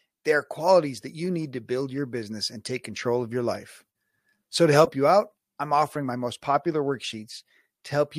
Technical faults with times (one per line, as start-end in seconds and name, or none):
none